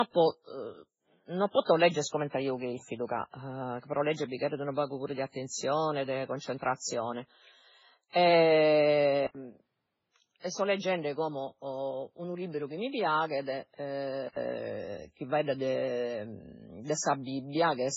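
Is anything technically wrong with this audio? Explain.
Yes, two things. First, transcoding between lossy codecs, throughout: nothing above 7.7 kHz, with smeared, swirly artefacts from two coders stacked together. It likely went through a very low-bitrate MP3 and then a Vorbis encode, each adding its own damage and keeping the lowest cut-off.

Second, from 9.27 to 14.36 s, there's an input switched to a poorer device, likely a different mic or a headset call profile. An 80 ms gap marks the switch. The speech then turns duller, topping out around 6.4 kHz, drops a few dB, and picks up a faint new background hiss.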